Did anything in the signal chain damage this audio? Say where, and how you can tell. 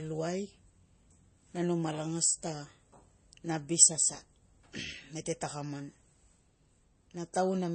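Yes. At the codec stage, likely MP3 compression short of bits (around 32 kbps), throughout. The speech has no treble above 8.3 kHz, and flickering, dropped weak components sound watery.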